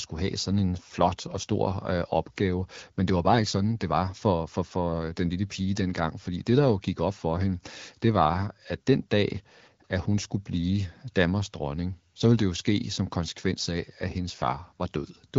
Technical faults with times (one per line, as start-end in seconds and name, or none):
1.31-1.36 AMR bit errors
10.18-10.24 AMR bit errors